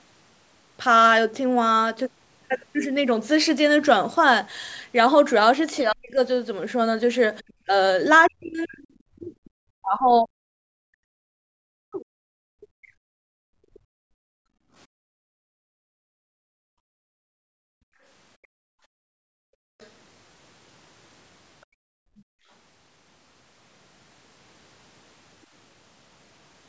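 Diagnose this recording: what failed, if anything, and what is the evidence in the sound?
Speech suppressed in double talk, at the call-processing stage: the speech drops by up to about 40 dB at 5.83–6.18 s, about 25 dB at 7.41–7.74 s, and in pieces across 8.27–14.07 s. The likely cause is the echo canceller attenuating both talkers at once. The spectrogram shows harmonic stacks broken by dark gaps, and the waveform envelope collapses.

The other side's voice is leaking through as faint fragments at 7.48–7.53 s, 8.25–9.26 s and 19.8–19.9 s, about 30 to 35 dB below the main speech. This is likely residual loudspeaker echo the canceller failed to subtract. It appears as a weak second set of harmonics under or between the main talker.

Background gated by the echo canceller, also in call processing: the room tone drops by about 33 dB across 14.35–19.79 s and about 29 dB at 21.65–22.48 s, then returns. 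The noise floor falls abruptly to near silence on the waveform and shows as a blank band on the spectrogram, with sharp edges where the gate engages and releases.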